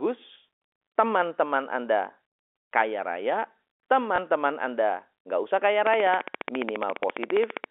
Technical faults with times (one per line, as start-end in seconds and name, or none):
0.34 packet loss with last packet repeated
4.16 packet loss with last packet repeated
5.87-7.65 train of clicks
7.00 packet loss with last packet repeated